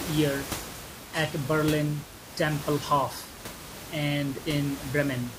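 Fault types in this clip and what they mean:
No system faults heard in this speech recording.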